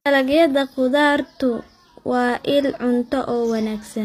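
Throughout, the treble sounds synthetic, with gritty, lispy s sounds and nothing above 14.9 kHz, likely HE-AAC compression at a low bitrate near 24 kbps, rebuilding highs by band replication.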